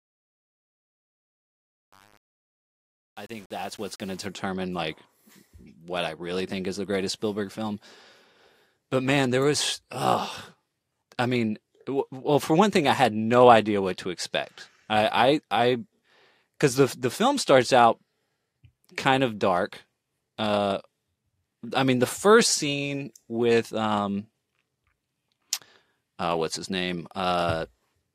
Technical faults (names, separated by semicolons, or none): truncation distortion on a fade